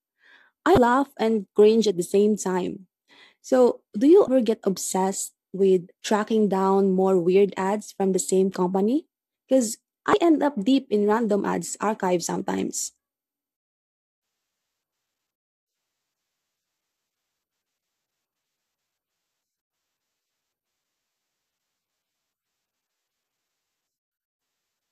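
Three short bursts of damaged data in the compressed stream hit this speech, at 0.75–0.78 s, 4.25–4.28 s and 10.11–10.14 s. Each time the decoder misreads corrupted frames, loses sync and hunts for the next header, leaving a quick 30 ms chirp or squawk.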